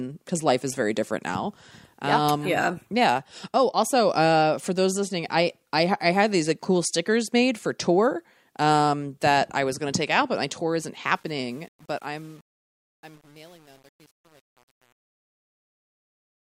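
From 11.13 s to the end at 16.40 s, the speech fade-out shows truncation distortion: the fade stage keeps only about 8 bits with no dither, so from 11.39 s the quieter speech turns gritty and square-stepped. Unlike gate chatter, the grit deepens steadily with the fade.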